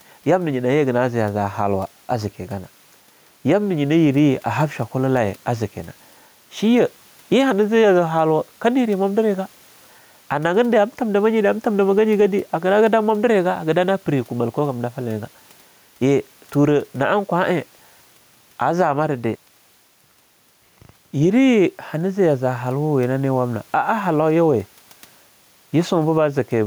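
Gain pumping throughout: the background swells by roughly 10 dB in pauses and ducks under loud sounds, likely from excessive gain feeding a fast limiter.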